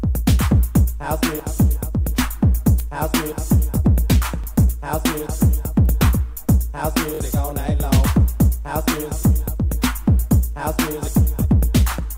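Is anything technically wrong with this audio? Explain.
Yes. Bluetooth stutter at 4.44–4.47 s and 7.15–7.20 s: late packets made the receiver replay its last buffer, giving brief repeated slices, about 21 ms and 43 ms, before playback skips ahead.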